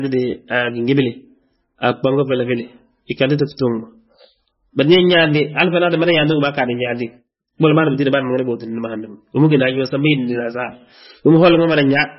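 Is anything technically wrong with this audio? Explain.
Yes. Throughout, the speech has a hard treble ceiling at 5.6 kHz and watery, swirly artefacts. This is likely MP3 compression at a very low bitrate, around 17 kbps. A spectrogram shows a flat cutoff and flickering holes where weak components drop out frame by frame.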